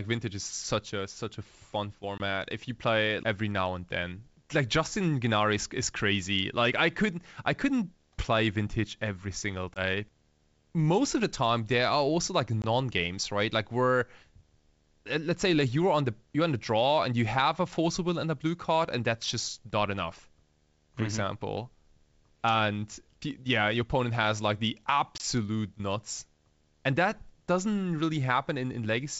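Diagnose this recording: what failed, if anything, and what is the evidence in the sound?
Short hard-edged dropouts at 2.18, 9.74, 12.62 and 25.18 s, each about one 20 ms packet, are network packet loss on the ADPCM call; the decoder's predictor briefly desynchronises.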